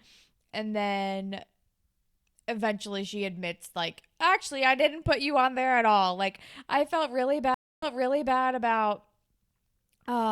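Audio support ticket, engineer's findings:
Stream reconnect, 7.54 to 8.37 s. Speech drops to silence for 0.28 s, then resumes 0.55 s earlier, so a short stretch repeats. Probable component: network stream client and decoder. The connection dropped, the player reconnected, the server resent a burst, and a fresh decoder started mid-stream, fading in its first frame.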